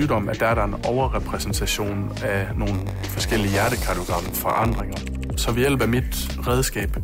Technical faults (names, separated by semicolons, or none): block size mismatch (padded)